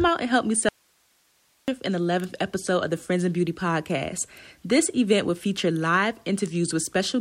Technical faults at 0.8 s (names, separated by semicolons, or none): audio dropout to a faint residue